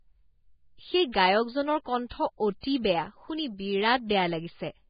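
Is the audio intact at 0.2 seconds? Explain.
No. At 0.2 seconds, as throughout the whole clip, the speech sounds hissy and grainy, with a dull top where nothing remains above about 4.9 kHz and consonant onsets smeared. This is heavy Vorbis compression, likely at a very low setting that fits a bitrate near 15 kbps. The encoder has lowered its cut-off and quantised the remaining treble so coarsely that fine detail has turned into noise of similar energy.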